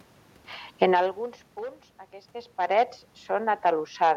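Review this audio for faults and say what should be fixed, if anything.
From 0.82 to 2.12 s, speech and room noise sink together by about 6 dB. This is automatic gain falling, where the control lowers its gain after judging the input too loud.

From 2.1 to 2.99 s, speech and background swell back by about 3 dB. This is automatic gain rising, as the control reacts when the input drops about 15 dB around the talker's movement near 2 s.

To prevent both, set a fixed input gain, or slow the automatic gain control, so it stops chasing the talker's distance changes.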